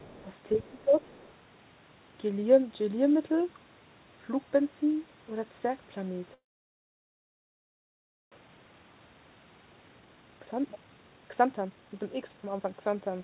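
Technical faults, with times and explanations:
0.00 to 0.22 s, 0.62 to 0.82 s and 1.03 to 1.33 s, other side's voice leaking through: A second, much fainter voice sits under the speech in three short scraps. It is far below the main talker, around 25 to 30 dB down. The likely cause is a loudspeaker at the talker's end feeding the far side back into the microphone, with the echo canceller leaving a residue each time.
0.55 to 0.96 s, speech suppressed in double talk: The talker's level sags for roughly a third of a second in total, dropping by about 15 dB at its deepest, so the speech sounds ducked. They overlap a scrap of the leaking far-side voice at 0.62 s. This is likely the echo canceller meeting both sides talking at once and, unable to tell them apart, turning everything down.
6.34 to 8.34 s, call audio freeze: The sound stops for about two seconds. A brief tail carries on from the last sound and then gives way to near silence lasting about 1.9 s. 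When the audio returns it picks up exactly where it stopped, with nothing lost, so a gap of almost two seconds has been inserted. The likely cause is delayed packets draining the jitter buffer until they finally arrived.
8.41 to 13.23 s, jitter buffer speed-up: From here to the end the speech runs at 140 percent speed with its pitch unchanged, so it sounds rushed and clipped. About two seconds of audio are cut out in small slices, each one or a few pitch periods long. The receiver is shedding the delay built up during the freeze, as the held-back packets arrive together and overfill its buffer.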